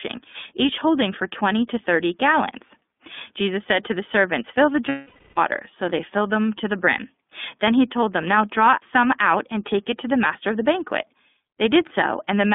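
From start to finish, the speech carries the sound of the iLBC codec. It is narrowband. Little passes below 200 Hz or above 3.6 kHz, so the voice sounds thin and boxed in. Each 30 ms frame is coded on its own, with no help from the frame before. That keeps the speech clear. The damage is still plainly audible, as a rough, slightly synthetic edge. The texture fits iLBC's 13.33 kbps mode.

From 4.88 to 5.38 s there are lost iLBC frames. About 480 ms of packets never arrived, which fits 16 frames gone. The decoder fills the gap by repeating the last pitch cycle, blended with noise and fading as the loss runs on. It comes out as a held, buzzy, breathy vowel. Once packets return, the speech sounds right again almost at once.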